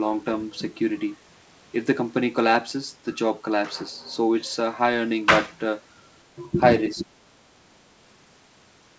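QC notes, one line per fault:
6.35–6.41 s, speech suppressed in double talk: a brief dip of roughly 15 dB, likely the echo canceller turning the talker down while the far side spoke.
6.94–7.09 s, speech suppressed in double talk: a deeper cut of about 20 dB, likely the echo canceller mistaking overlapping speech for loudspeaker echo and attenuating it.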